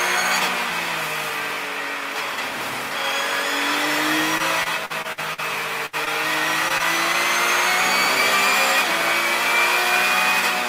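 From 4.38 to 5.40 s there is repeated packet loss, heard as a robotic sound. Six separate gaps fall in this stretch, the longest 52 ms. Each hole is bridged by extending the last bit of sound, and then the next hole arrives. About a fifth of the span is patched this way, roughly 200 ms in all. The result is choppy and mechanical, with short pieces dropping out.

At 5.86 to 5.95 s comes a burst of packet loss. About 60 ms of audio never arrives in time. The receiver stretches the last sound across the gap for 70 ms and lets it fade as it goes. A voiced sound turns into a held buzz, and anything noisier becomes a dying hiss. Then the audio picks up again further along, and the missing slice is simply gone.

Three cases of short concealed packet loss follow, at 6.05 to 6.08 s, 6.68 to 6.72 s and 6.78 to 6.81 s. In each, about 20 ms went missing and was covered by roughly 15 ms of synthesized continuation. 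The filler copies the preceding pitch, or imitates the noise if there is no pitch, then merges back into the real signal. Each one is a quick smear or wobble, and a brief consonant-like sound could disappear inside it.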